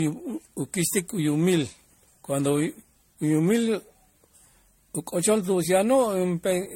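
Throughout the speech, generation loss leaves a swirly, hollow, smeared texture with blurred consonant attacks, likely from around ten successive MP3 re-encodes at roughly 64 kbit/s. On a spectrogram, nothing appears above 16.5 kHz, and flickering spectral holes pockmark the upper bands.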